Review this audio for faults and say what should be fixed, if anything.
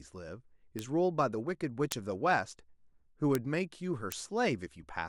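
Bit error spikes at 0.79, 1.92, 3.35 and 4.12 s are single sharp ticks peaking at about -15 to -9 dBFS. Each comes from a flipped bit briefly throwing one to three samples off by a power of two before they snap back. Unlike edit clicks or clipping, these ticks are full-band, instantaneous and unrelated to the speech around them. To prevent them, use error-checked storage and digital links, such as ECC memory and CRC-protected transfers.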